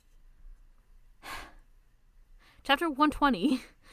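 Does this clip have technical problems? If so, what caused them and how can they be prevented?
No, nothing in this speech clip points to a technical fault, so there is no cause to trace and nothing to prevent.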